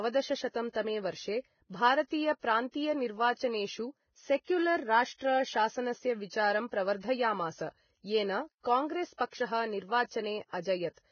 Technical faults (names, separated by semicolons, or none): Vorbis compression; pre-echo